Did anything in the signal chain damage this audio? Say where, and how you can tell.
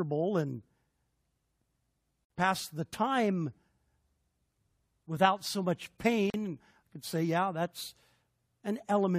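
Yes. The damage is at the codec stage: a gap at a join of encoded pieces, twice. A silence of about 53 ms opens at 2.25 s and one of about 40 ms at 6.30 s, four seconds apart. Separately encoded pieces were joined untrimmed. Encoder delay and last-frame padding remained.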